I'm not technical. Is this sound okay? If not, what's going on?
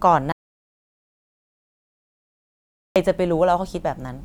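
No. There is an audio dropout to silence from 0.32 to 2.96 seconds. The speech stops suddenly and leaves total silence, with no background sound at all. About 2.6 seconds of speech is missing. The likely cause is a loss of the input signal.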